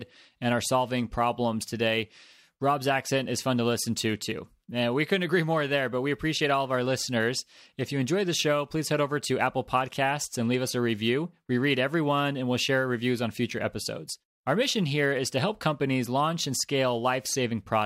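An unstable sampling clock in the converter, wandering by a few microseconds, makes each sample land slightly early or late, so this speech recording carries sample clock jitter throughout. The resulting hiss and roughness sits about 30 dB below the signal, swelling on loud and sibilant moments and disappearing in pauses.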